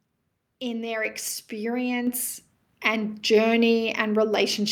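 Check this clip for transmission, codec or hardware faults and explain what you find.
There's a fault here, the microphone volume stepped up twice. At 1.05 s, right after "in their", the level jumps about 4 dB, then again about 3 dB at 2.07 s. The call software raised the mic's input gain, so speech and background lift together.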